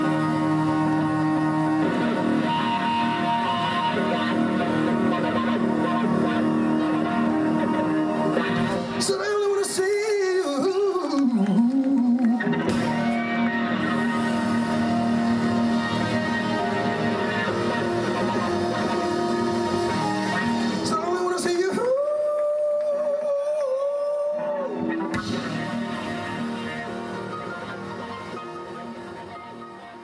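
No technical faults are audible.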